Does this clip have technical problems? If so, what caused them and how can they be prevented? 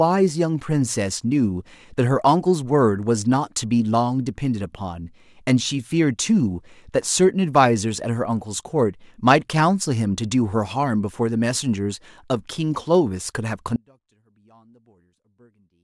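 Yes. At 13.76 s an audio dropout to a faint residue cuts the speech abruptly until the end. What remains sits roughly 35 dB down: a thin waveform trace and a near-empty spectrogram. The likely cause is a break upstream while the later path stayed live. Secure cables and connections, and monitor input during recording.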